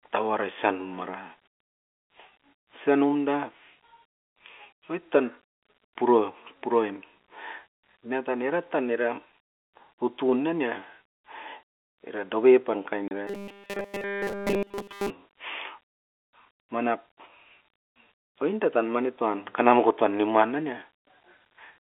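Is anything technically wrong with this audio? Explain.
Yes, there are two faults, close together, heard over a telephone-band G.711 line.

Packet loss filled with silence occurs from 13.08 to 13.11 s. A 30 ms stretch of audio, consistent with a single lost packet, never arrived, and the receiver played silence in its place. The result is a brief hole in the speech, with an abrupt cut and restart at each edge. On a waveform it shows as a flat line with sharp vertical boundaries. A spectrogram shows a narrow blank column.

Robotic sound from repeated short buffers follows from 13.27 to 15.10 s. Fresh audio was arriving too rarely, and the gap was likely filled by looping a very short stretch of the last audio received. The loop rate imposes a steady 200 Hz pitch, which points to a segment of about 5 ms. Essentially all of this stretch is repetition, so the speech becomes a rigid, metallic buzz that only loosely tracks its rhythm. 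A spectrogram shows evenly spaced flat harmonic lines at multiples of 200 Hz. The waveform shows an identical short cycle repeating throughout.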